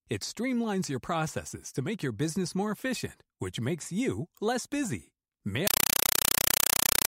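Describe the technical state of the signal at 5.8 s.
Compressed stream played as audio, 5.67 s to 7.08 s, right after "makes you less busy": an undecoded AC-3 bitstream is passed through as plain samples, so each frame plays as a 5.33 ms noise burst, then silence, 31.25 times a second, as loud, chattering static replacing the speech.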